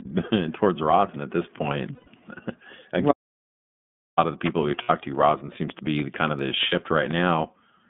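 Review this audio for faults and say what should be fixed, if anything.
The speech has clearly audible iLBC codec damage throughout. Nothing passes outside roughly 150 Hz to 3.5 kHz, and the voice sounds rough and slightly synthetic, which fits the 13.33 kbps mode with 30 ms frames. On a spectrogram, energy stops sharply at 3.5 kHz. Use a wideband codec, or record locally, wherever the channel allows.

Lost iLBC frames occur at 1.95 to 2.08 s (120 ms), 4.83 to 4.90 s (60 ms), and 6.69 to 6.73 s (30 ms). In each gap, the decoder repeats the last pitch cycle mixed with noise, producing a brief buzzy held vowel. The spectrogram shows frozen, smeared harmonics. These gaps fit four, two and one lost frames. Reduce packet loss with a better network path, jitter buffering or forward error correction.

An audio dropout to silence runs from 3.12 to 4.18 s, about 1.06 s of total silence with no room tone, so the speech cuts off mid-flow. 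The waveform is a flat line, and the spectrogram is blank across all frequencies. This is likely a disconnected input or a momentary mute. Secure the connections and monitor input levels while recording.

A train of clicks runs from 5.70 to 7.21 s, about seven clicks at an irregular pace of roughly 4.7 per second. They reach roughly ten decibels above the speech and can be heard in the pauses. Each appears as a thin vertical stripe on the spectrogram and a sharp spike on the waveform. These are likely interference from nearby equipment or a faulty connection. Move cables away from interference sources and check the interface.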